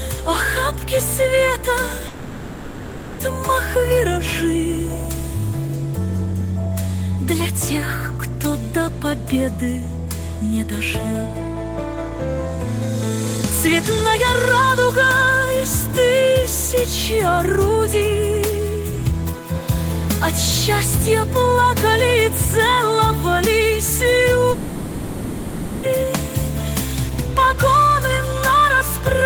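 From 2.07 to 3.21 s and again from 24.51 to 25.85 s, the audio stops and the last sound is stretched into a fading buzz, most likely a long network dropout. The concealment fills all 1.12 s and 1.32 s, then audio resumes with that stretch missing. A spectrogram shows smeared, repeating bands that dim. The waveform shows a decaying envelope.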